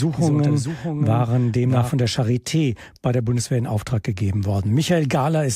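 From the very start until about 1.9 s, a doubled audio track is running. A second copy trails roughly 0.7 s behind, a few dB quieter, likely from a slower capture path, then cuts off abruptly.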